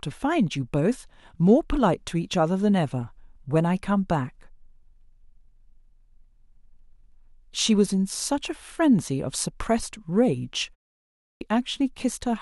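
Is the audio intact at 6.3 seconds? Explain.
Yes, the audio is intact at 6.3 seconds, with no fault at that moment.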